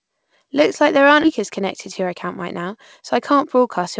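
A speech clip in which, right after "like there aren't", at 1.24 to 1.26 s, the talk jumps abruptly forward with no gap. This is a skip ahead: around 0.4 s of audio was discarded while later packets were already queued, so the two sides are spliced together. From 1.39 to 3.78 s the speech sounds slightly hurried at unchanged pitch, running about 105% speed. This is a jitter buffer speed-up, where many tiny pitch-period slices, roughly 0.15 s in total, were trimmed to shrink the excess buffered delay. The audio carries a G.722-style call-codec character with nothing above 8 kHz.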